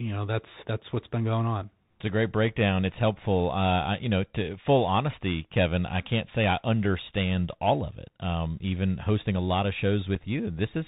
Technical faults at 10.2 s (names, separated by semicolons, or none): Bluetooth CVSD headset codec; unconcealed Bluetooth headset packet loss